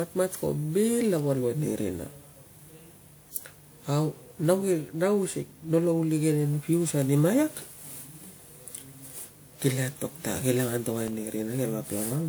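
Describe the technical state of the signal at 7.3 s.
At 7.3 s the speech carries a swirling, hollow smear with softened consonant attacks, present throughout the clip and likely generation loss. Repeated lossy re-encoding, around seven passes of a WMA-style codec near 128 kbit/s, stacks quantisation noise. Content still reaches about 20.1 kHz.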